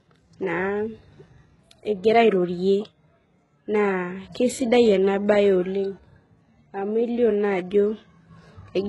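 Throughout, the speech carries heavy HE-AAC compression damage, likely from a very low bitrate near 12 kbps: the treble is rebuilt from copied lower bands, so s sounds turn gritty and lispy. A spectrogram shows smeared, repeated upper bands and nothing above 11.5 kHz.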